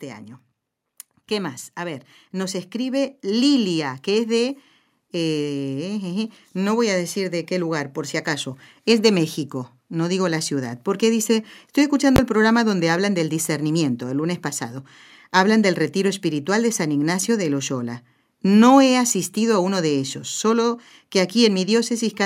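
From 1.28 to 11.13 s, automatic gain rises. The control judged the input too quiet and lifted gain about 10 dB. Voice and background swell together.

At 12.16 s, invalid numbers hit full scale. A calculation produced invalid values, forcing a 20 ms block to maximum level. It lands as one sharp bang.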